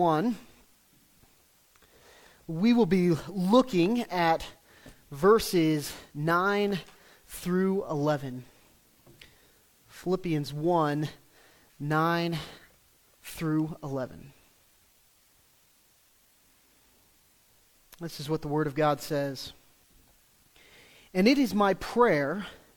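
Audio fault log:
No audible faults were found anywhere in this audio.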